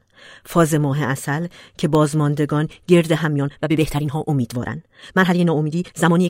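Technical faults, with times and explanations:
1.29–1.95 s, CD scratch ticks: A scratch or blemish on the disc wiped out more data than the player's error correction could rebuild, and the damaged spot came round once per revolution. Each time, the player papered over the lost samples by interpolating or muting them, leaving six short ticks, the longest only a few milliseconds, spaced roughly nine to the second.
3.21–6.29 s, time-stretched section: Likely, editing software compressed this final stretch to fit a shorter length, running it about 1.53 times faster while holding pitch by cutting out short slices of audio and butting the rest together. The speech suddenly becomes rushed from this point to the end, with syllables crowded together, yet the pitch stays where it was.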